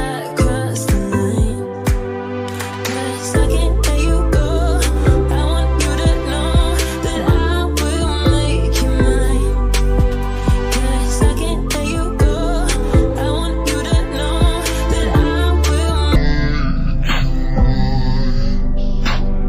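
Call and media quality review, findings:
Stereo read as mono, 16.16 s to end (19.48 s). Sound drops to half speed, an octave low (-12 semitones), with a fainter mirrored image in the upper half of the spectrum. Probable component: decoder or playback channel-layout handling. Interleaved left/right samples consumed sequentially as one channel, doubling the frame count.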